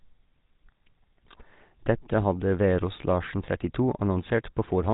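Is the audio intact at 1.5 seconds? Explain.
No. At 1.5 seconds, as across the whole clip, the speech has been through the GSM full-rate codec, consistent with a 13 kbps link. The codec rebuilds the voice from a vocal-tract model excited by a coarse, evenly spaced pulse train that keeps only a fraction of the original detail, and nothing above 3.8 kHz survives. The result is plainly audible: a buzzy, gravelly roughness over the voice and a dull, band-limited top end.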